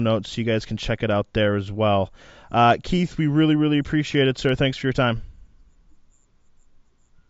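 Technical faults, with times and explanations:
No technical faults can be heard in the speech, so there are no times or explanations to give.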